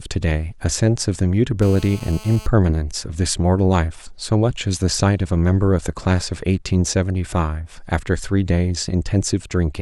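A nearby 2G phone transmitting in bursts during a call gets rectified by the audio circuitry, putting GSM phone buzz into this speech clip from 1.62 to 2.47 s: a steady, harsh rasp at about 217 Hz, rich in harmonics, sitting about 21 dB below the speech.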